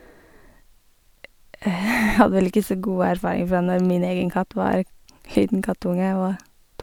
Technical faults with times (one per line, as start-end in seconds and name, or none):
none